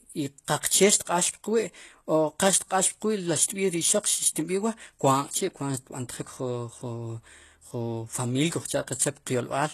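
Throughout the speech, the treble sounds bright yet synthetic. The s sounds come out gritty and metallic, and nothing survives above 12.3 kHz. This is likely HE-AAC compression at a low bitrate of about 16 kbps. The codec copies lower bands upward to fake the top octave, so the high harmonics fail to line up with the body of the sound. A plain low-pass would simply dull the treble, not add this glassy sheen.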